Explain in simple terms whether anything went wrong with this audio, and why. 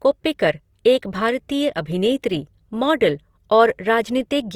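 Opus compression affects the whole clip, start to finish. The speech sounds rough and grainy. This is likely the Opus codec in its music mode: when it runs short of data, it fills parts of the sound with noise or copies of lower parts instead of the real detail.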